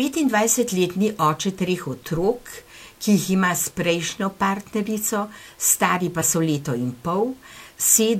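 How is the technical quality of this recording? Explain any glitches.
There's one glitch, a corrupt frame decoded at 6.21 to 6.24 s, right after "prejšnjo partnerico stari pa" and just before "so leto in". The damage spans a couple of frames: bits in the compressed data got flipped and the decoder played them anyway, so misread gains and codes dumped energy at the wrong frequencies. It comes out as a short chirp, squeak, blip or burst of noise, peaking at about -15 dBFS, lasting only as long as those frames.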